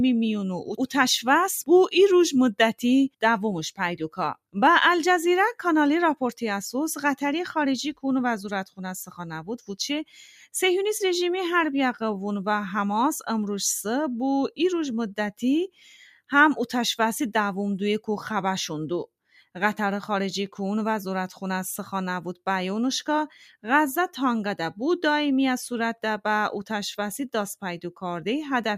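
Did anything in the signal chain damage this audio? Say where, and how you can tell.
Yes. The damage comes from the call-processing stage, where the noise suppressor mistook part of the wanted sound for noise. From 15.68 to 15.84 s the level sinks by about 17 dB, and from 19.3 to 19.46 s by about 11 dB, each dip lasting around 150 ms. The suppressor's gain estimate classed those stretches as background and applied attenuation meant for noise, pulling real content down with it.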